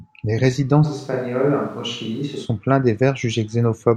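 From 0.86 to 2.44 s the speech turns suddenly roomy and hollow, thinner in the bass and about 5 dB quieter, with more background noise, then snaps back. That abrupt change, with noise rising, points to a likely switch to a distant microphone, not added reverb.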